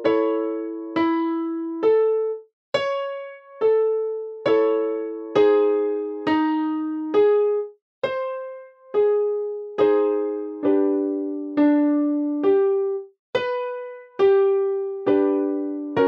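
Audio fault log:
No faults detected in this clip.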